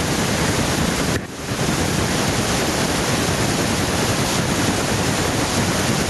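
Gain pumping runs through the whole speech clip. The background rises in each pause, then ducks as the talker gets loud, swinging by around 10 dB. The likely cause is input gain set far too high, with a fast limiter clamping every peak. The speech sounds squashed.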